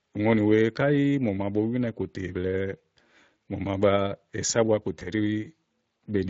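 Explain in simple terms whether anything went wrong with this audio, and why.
Two things went wrong with this speech.

The first lasts the whole clip. The sound carries the marks of the Speex codec, an older compression method built for internet calls and game chat. Speex rebuilds the voice from a rough model of the throat and mouth, and it had too little detail to work with here. The result is a plainly audible roughness. The voice sounds grainy and hoarse, less like a real person in the room.

The second is a short glitch from about 4.99 to 5.09 s. This is VoIP packet loss concealed by the speech codec. A small piece of the call, about 20 ms, never arrived, which fits a single lost packet. The decoder covered the hole by stretching out the last sound it had, fading it as it went. That produces a brief buzzy or smeared blip. The decoder builds each new moment on the one before, so the voice stays weak or distorted for a moment after the real sound returns.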